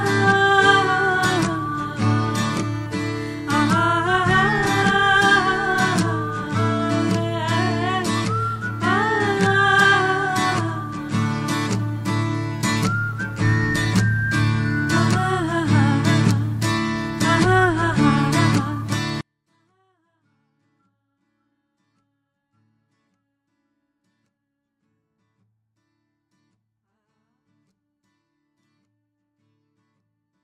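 A 24-bit alignment error (too quiet) begins at 19.21 s and lasts to the end: 24-bit samples sitting in the low bytes of 32-bit words are read as full 32-bit integers, so the sound stays clean but drops by about 48 dB, becoming nearly inaudible.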